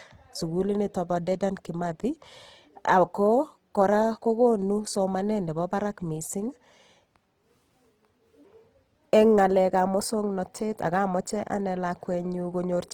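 Throughout the speech, the audio was likely squeezed through Opus compression in its music-oriented CELT mode at a very low bit budget, which fits a rate around 16 kbps. With too few bits, the encoder keeps each band's overall energy but refills much of its detail by copying lower bands or inserting noise. The result is plainly audible: rough, grainy and noisy texture across the full band, with content still reaching about 20.2 kHz.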